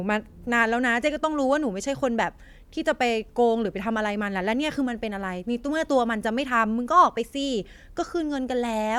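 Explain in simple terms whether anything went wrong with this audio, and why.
Nothing went wrong with this speech recording that a listener can pick out. There is no break, jump or unexpected sound anywhere in it.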